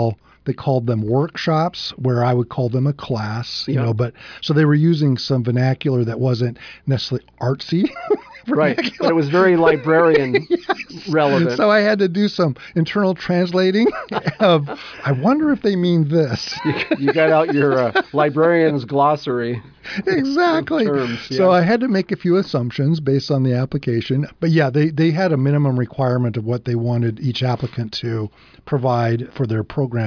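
No technical faults can be heard anywhere in this audio.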